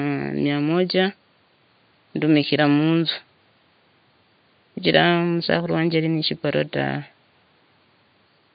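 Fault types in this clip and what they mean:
No faults present; the speech sits about 40 dB above the room's own background noise.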